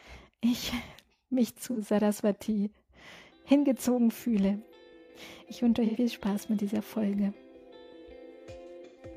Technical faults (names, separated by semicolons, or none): AAC frame loss with concealment